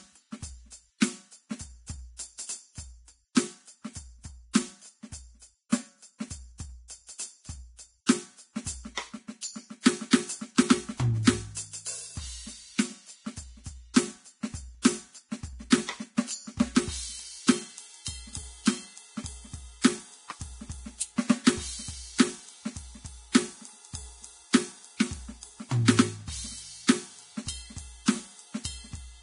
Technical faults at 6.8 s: Vorbis compression

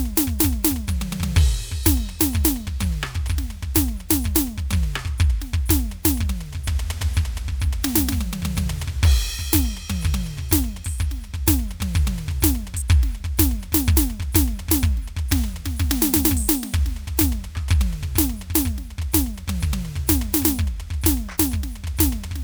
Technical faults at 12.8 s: none

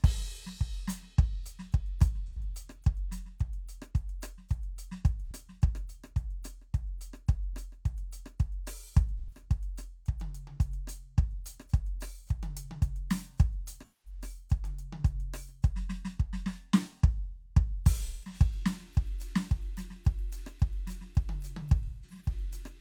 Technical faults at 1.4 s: none

